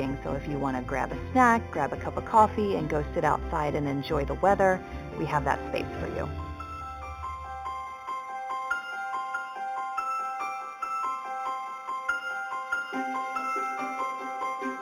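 Imaging from linear upsampling runs throughout: straight-line interpolation, which fits 8 kHz audio raised to 44.1 kHz, dulls the top and leaves a faint mirrored band from 4 to 8 kHz, roughly 30 dB down, heard as metallic shimmer.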